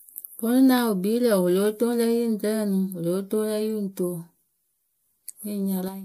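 Speech, with a corrupt frame decoded at 3.73 s: damaged bits in a few compressed frames were decoded anyway, putting energy at wrong frequencies and producing a brief chirp-like blip near -30 dBFS. Unlike a dropout or concealed lost packet, the sound is replaced by spurious energy at wrong frequencies rather than smoothed repetition.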